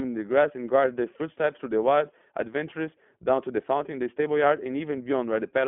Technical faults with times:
0.00-5.67 iLBC codec

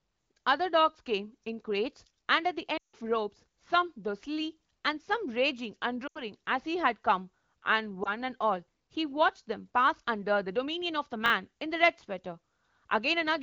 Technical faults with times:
2.77-2.95 lost AMR speech frames
6.07-6.22 lost AMR speech frames
8.03-8.11 lost AMR speech frames
11.26-11.30 chunks out of order

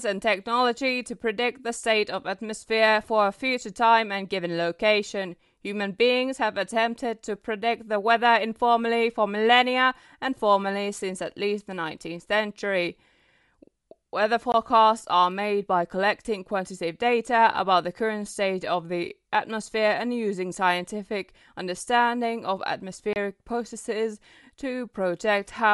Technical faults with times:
0.00-25.73 Bluetooth LC3 compression
14.52 block of digital silence
23.13-23.16 block of digital silence

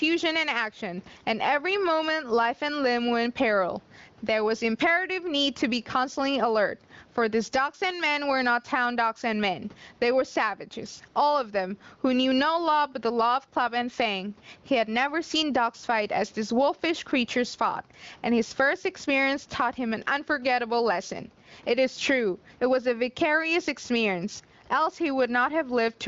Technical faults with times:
0.00-26.08 gain pumping

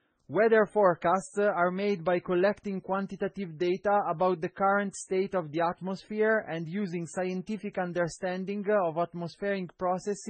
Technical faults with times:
0.00-10.29 transcoding between lossy codecs

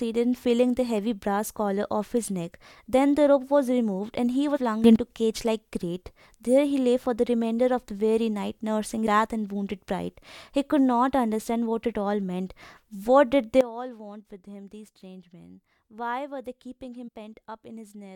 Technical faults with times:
4.55-4.57 compressed frames skipped
4.84-4.96 sudden gain jump
9.06 compressed frames skipped
13.61-18.16 sudden gain jump
17.07 compressed frames skipped

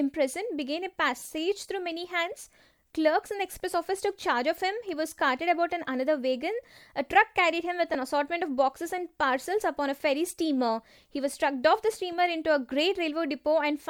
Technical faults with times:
1.19-1.22 lost LE Audio frames
7.94 lost LE Audio frames

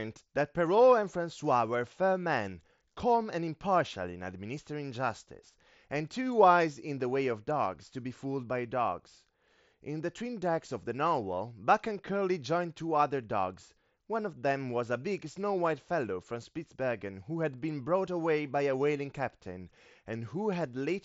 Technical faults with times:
none

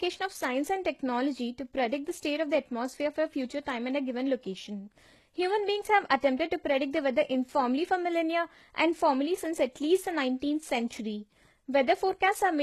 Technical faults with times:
0.00-12.62 HE-AAC compression

